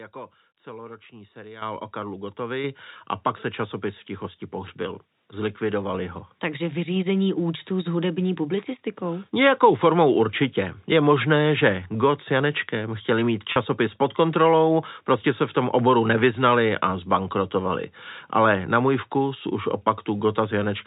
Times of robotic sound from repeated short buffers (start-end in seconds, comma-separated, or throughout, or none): none